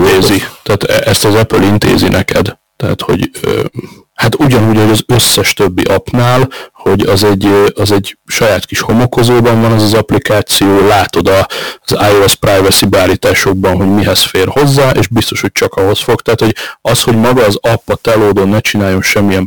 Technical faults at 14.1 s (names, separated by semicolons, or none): hard clipping; sample clock jitter